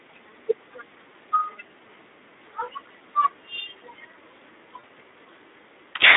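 Throughout, the speech carries plainly audible Speex codec damage: a hoarse, noisy texture from a starved CELP excitation, with the band confined to roughly 250 Hz to 3.7 kHz. The degree of roughness points to a low setting around 11 kbps.

At 4.79 to 4.84 s, VoIP packet loss concealed by the speech codec replaces about 40 ms of audio, consistent with two lost 20 ms frames. The decoder extends its last pitch and filter into a buzzy tone or coloured noise that fades.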